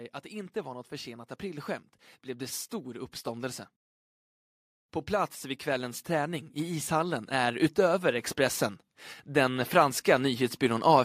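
Speech that swells twice, voice and background rising together: from 5.08 to 8.66 s by about 7 dB, then from 9.26 to 11.0 s by about 4 dB. This is automatic gain rising, where the gain control judged the input too quiet and slowly raised its level.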